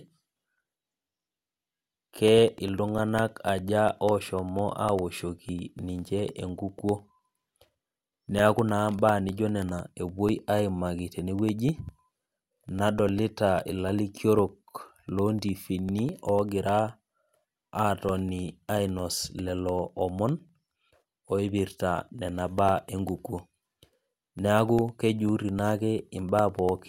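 Regular ticks sound every 0.1 s from 0.08 to 26.79 s: periodic USB or driver dropouts silencing roughly a millisecond of speech each time.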